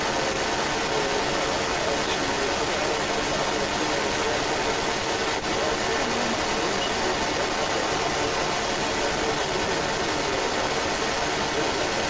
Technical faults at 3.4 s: echo leak

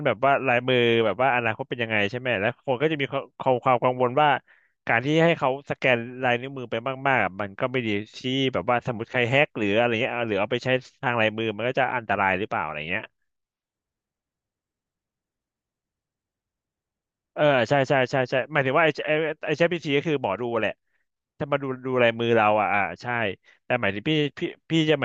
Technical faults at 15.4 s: none

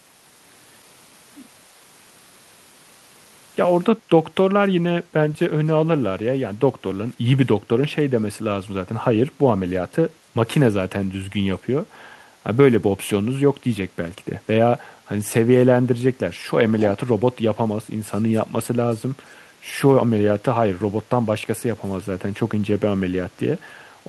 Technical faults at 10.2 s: background gated by the echo canceller

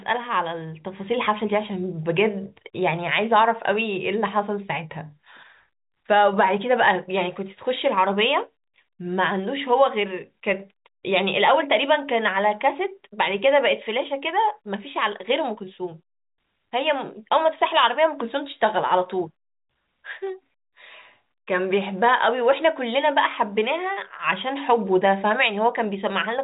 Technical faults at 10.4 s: none

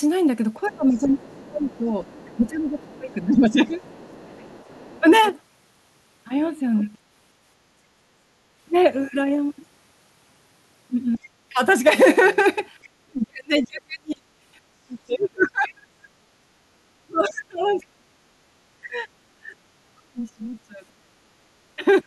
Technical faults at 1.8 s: other side's voice leaking through; speech suppressed in double talk

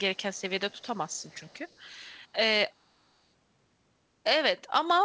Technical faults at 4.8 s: none

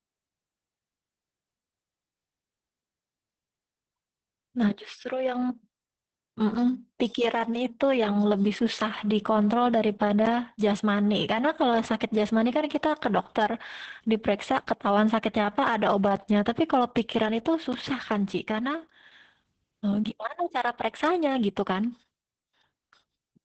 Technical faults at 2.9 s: Opus voice compression

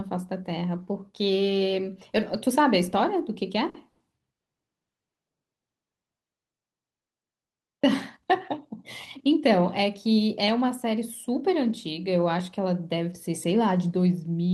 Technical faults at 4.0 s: call audio freeze

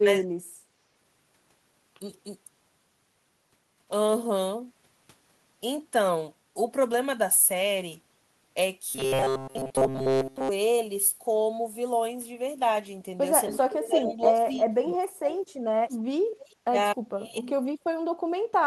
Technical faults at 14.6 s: speech suppressed in double talk

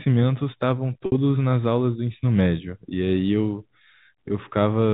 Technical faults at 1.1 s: packet loss with pitch repetition

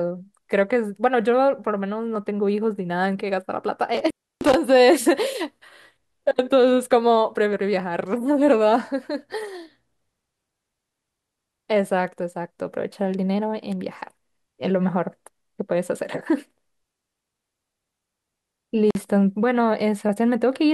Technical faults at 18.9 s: intermittent contact

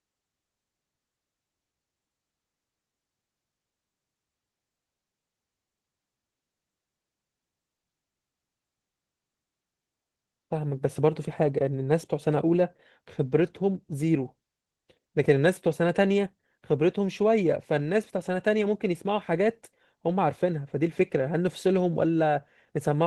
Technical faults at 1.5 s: Opus voice compression

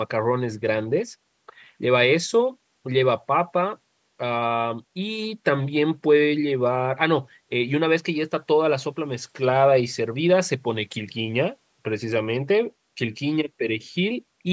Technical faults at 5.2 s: none

